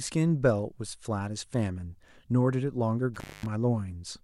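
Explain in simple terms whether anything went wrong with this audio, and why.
Around 3.14 to 3.46 s there's an intermittent contact: a loose plug or cable briefly opens, so the speech drops out for about a quarter second, crackling at either edge.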